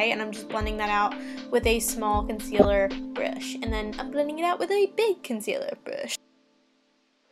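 From 2.59 to 2.65 s a brief glitch puts sound at the wrong frequencies: a corrupt frame decoded, where flipped bits in a few compressed frames were played regardless.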